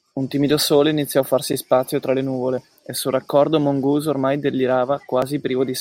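It's a speech clip with two small skips, one at 2.58 s and one at 5.22 s. Each is a point where the sound jumps straight ahead with no gap, losing around 15 ms and around 10 ms respectively. That pattern is most likely a dropped buffer (overrun): the recording side didn't pull its samples in time, the hardware wrote over them, and the audio on either side got spliced together.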